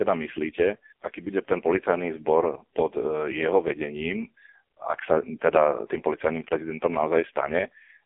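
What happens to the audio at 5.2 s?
At 5.2 s you're hearing the AMR narrowband mobile codec, present throughout: nothing above 3.6 kHz, a thin phone band, and buzzy, synthetic speech that fits its lowest 4.75 kbps mode.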